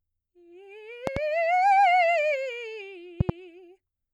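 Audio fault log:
1.07–1.19 s, 3.21–3.32 s: loud pop, two sharp pulses each time, about 15 dB above the music, which continues underneath; likely a voltage spike in the signal path.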